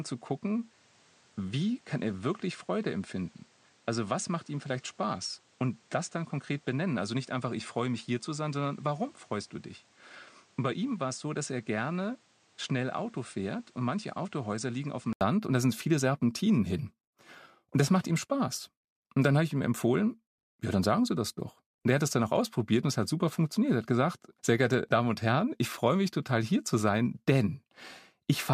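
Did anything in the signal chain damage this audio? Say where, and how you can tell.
Yes. For the first 15.21 s the speech comes through a band-limited input, with nothing above 9.5 kHz. The level sits roughly 5 dB lower, and a background hiss runs only about 30 dB under the speech. At 15.21 s an 80 ms silence falls just before "und da sind viele", and the full bandwidth returns. This points to the input stage, likely a switch from a poorer device to the proper microphone. A codec bandwidth change would not also shift the noise floor, the level and the tone together, with a gap at the changeover.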